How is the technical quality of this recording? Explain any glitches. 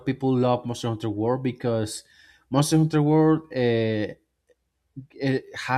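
No glitches or dropouts are audible anywhere in the speech recording, and nothing in it calls for explanation.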